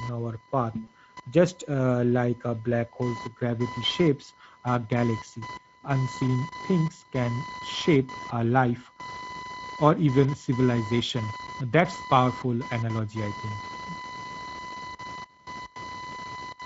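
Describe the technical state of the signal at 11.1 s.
VoIP packet loss concealed by the speech codec occurs at 11.07 to 11.11 s. A single lost frame, about 20 ms of audio, is bridged by the Speex decoder, which keeps running on its last pitch and spectral filter while lowering the gain. The gap is smeared into a short buzzy tone or coloured noise that fades. Because each decoded frame depends on the previous one, the speech sounds weak or distorted for tens of milliseconds or more after packets resume.

Speex codec coloration is present at this moment and throughout the clip. The damage is plainly audible and is consistent with a middle quality setting, around 16.8 kbps. With few bits for the excitation, the speech sounds hoarse and noisy. Any content above 4 kHz is a shaped noise fill rather than real detail. The concealment at 11.1 s is built from this already coarse model.

Computer activity noise also runs underneath, roughly 15 dB below the signal. 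It is a buzzing, chirping pulse train near 1 kHz, caused by processor or peripheral load disturbing the audio circuit's shared ground. It follows the machine's activity rather than the speech.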